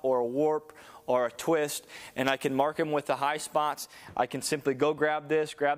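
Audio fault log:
0.00–4.05 s, pre-emphasis left on: the treble lift matching the CD 50/15 µs curve was applied but the complementary de-emphasis cut was never made, so highs stand about 8 dB above the 1 kHz level at 10 kHz, leaving the sound thin, bright and sibilant.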